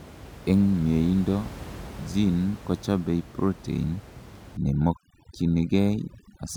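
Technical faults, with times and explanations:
4.57–6.57 s, overdone noise removal: the room noise, which sits about 18 dB below the speech before this point, suddenly drops and breaks up into twinkling specks. A noise reduction stage is set too aggressively here, pushing individual frequency bands down or off whenever they come close to its noise estimate, so the quieter parts of the speech are stripped out with the background.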